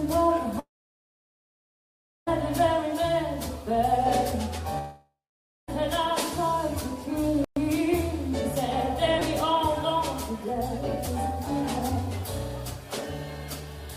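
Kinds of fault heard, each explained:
long network dropout: the sound cuts out for about 1.7 s and 0.9 s, fading into silence, then returns with material missing, likely from audio never arriving.
playback stall: the sound halts mid-flow for 120 ms and then carries on, likely because the player ran short of data or was blocked.
repeated buffer: brief buzzy clicks near 9.2 s and 11.06 s, where a 5.8 ms slice replays, fitting a 256-sample buffer repeated while new audio lagged.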